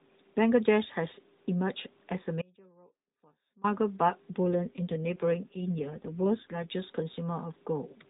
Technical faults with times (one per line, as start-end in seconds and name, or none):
2.42-3.64 audio dropout to a faint residue
4.46-6.75 AMR rate drop